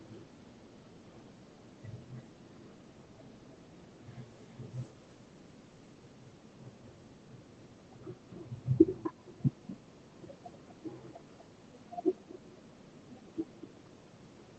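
Speech with echo leak: a faint delayed copy trails the talker from 0.26 to 7.29 s at 320 ms, then louder from 7.72 s at 239 ms, likely from incomplete far-end echo cancellation.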